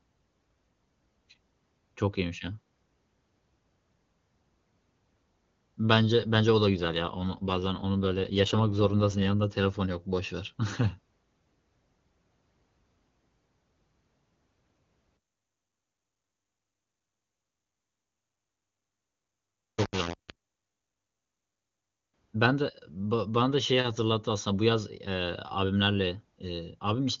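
An AMR rate drop runs from 6.75 to 9.32 s. The speech turns rougher and more synthetic with no gap and no loss of band. That fits the network pushing AMR-WB down from its clean 23.85 kbit/s to about 8.85 kbit/s to spend bits on error protection.

Low bit depth without dither follows from 15.17 to 22.14 s. Grainy distortion clings to the speech, with a noise floor roughly 20 dB below it. The quietest parts sputter or drop to silence, likely from rounding to about 4 bits with no dither to smooth the steps.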